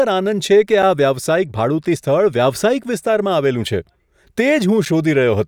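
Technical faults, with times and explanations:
0.82, 1.83, 2.84, 3.85 and 4.85 s: gap between chunks. The speech stops dead for about 7 ms at each of these points and resumes exactly where it left off, so nothing is missing, but the flow is broken by a short hole with hard edges. The holes recur once per second, which suggests the audio was delivered in 1-second blocks with a small stretch of silence inserted at every join, from padding or late playback of each block.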